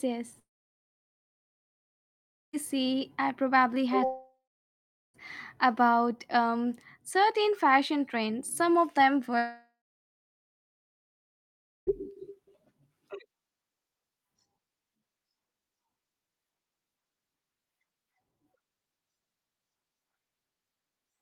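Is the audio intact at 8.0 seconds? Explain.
Yes, at 8.0 seconds the speech plays through cleanly, with no dropout, click, distortion or other fault to be heard at that point.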